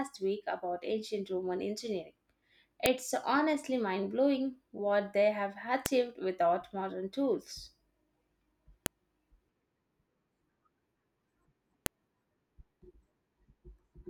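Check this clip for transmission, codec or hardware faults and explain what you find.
One fault type repeats through the speech: a file header played as audio, heard four times as sharp clicks at 2.86, 5.86, 8.86 and 11.86 s, exactly 3.0 s apart. The first falls just before "honestly mind blowing what", and the second comes after "blowing what they have" and before "without modern tools". Three-second pieces were joined with their WAV headers left in, so those bytes play as samples. On the waveform each appears as a brief spike, and on the spectrogram as a thin vertical broadband line.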